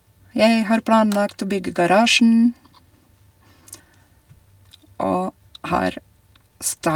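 Throughout the speech there is clock drift between sender and receiver: the sending side's clock runs slow, by about three percent, so audio arrives a little more slowly than the receiver plays it out. The jitter buffer keeps draining and has to be topped up, which makes the pacing feel faintly unsteady rather than clean. On a waveform the envelope looks normal in level, but the syllable spacing is slightly irregular from start to end.

From 0.42 s to 6.59 s this drift shows up as repeated timing corrections. To avoid running dry, the receiver keeps repeating short slices of audio, always lengthening and never cutting, which slows playback to about 97 percent of normal and adds roughly a fifth of a second across the stretch. The repeats fall at uneven intervals and, if heard at all, come across as small hiccups or a slightly dragging tempo. A spectrogram shows brief duplicated frames where harmonic patterns stutter or stretch at the splice points.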